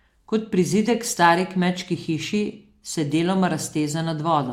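No technical faults can be heard anywhere in the speech recording, and the signal holds steady throughout.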